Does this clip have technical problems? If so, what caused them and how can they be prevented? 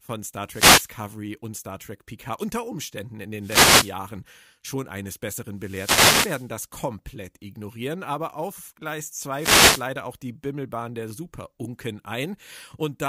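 Yes. This speech has four wireless microphone noise hits: 0.47 to 0.94 s, 3.39 to 3.96 s, 5.55 to 6.55 s (between "schon eines" and "komplett ignorieren aber auf"), and 9.37 to 9.85 s (just before "auch die"). Each is a swish of static that swells over the voice as the FM radio signal fades through reflection cancellation, letting receiver noise rise. Unlike a digital dropout, which goes silent or glitches, these fill the gap with hiss, and unlike steady background noise, they come and go. Prevention: use diversity receivers with well-placed antennas in clear line of sight to the transmitter.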